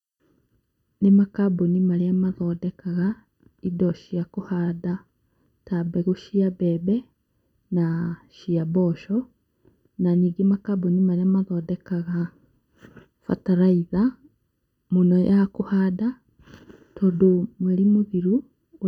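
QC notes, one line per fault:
Throughout, channel delay (comb filtering): one side lags by about 0.7 ms, so the mono sum notches out near 700 Hz and up, leaving the speech hollow and phasey.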